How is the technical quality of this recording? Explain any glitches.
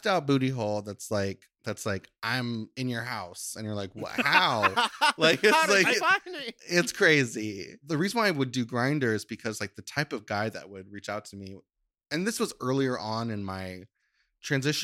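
The technical quality of this recording holds up, with no glitches to explain.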